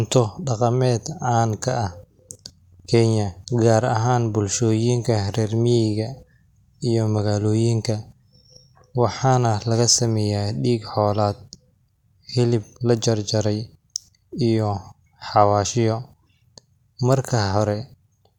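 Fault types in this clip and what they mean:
No technical fault can be heard anywhere in the speech. There is nothing to list under any fault type.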